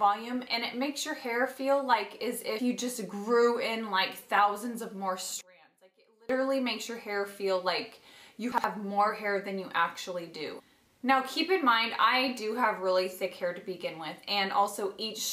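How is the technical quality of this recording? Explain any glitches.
Two glitches can be heard. From 5.41 to 6.29 s, the sound drops by about 29 dB. The likely cause is one channel inverted, cancelling shared content when summed to mono. At 8.52 to 8.64 s, the chunks are out of order. A 60 ms chunk plays one chunk late, leaving three hard joins and a jumbled moment.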